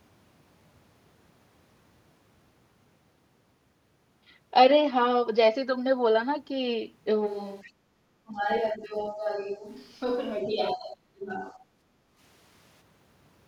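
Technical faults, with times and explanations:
7.28–12.80 s, switch to a distant microphone: the sound suddenly turns roomy and hollow, with thinner bass, about 10 dB quieter, and room noise only about 30 dB below speech. The close microphone likely dropped out, leaving a farther pickup until the abrupt return.
7.62–7.72 s, other side's voice leaking through: a brief scrap of a second voice appears, about 25 dB below the talker. This is likely loudspeaker playback reaching the microphone that the echo canceller failed to subtract, so a fragment of the far end slips through.
7.72–7.96 s and 11.83–12.17 s, background gated by the echo canceller: the room sound dips by about 12 dB, then by about 10 dB, for roughly 200 ms and 300 ms. The canceller clamped the microphone while the loudspeaker played, then released, so the ambience drops and returns.
8.24–8.48 s, 8.72–9.38 s, 9.56–9.67 s and 10.44–11.55 s, speech suppressed in double talk: the voice dips by about 20, 10, 5 and 30 dB. 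The last dip nearly removes it for about a second. Both sides were likely speaking at once, and the canceller attenuated the talker as if it were echo.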